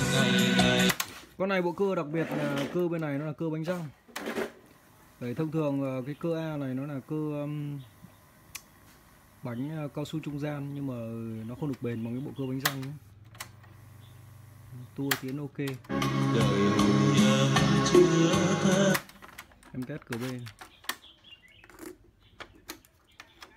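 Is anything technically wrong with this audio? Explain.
No, the signal shows no technical faults and holds steady throughout.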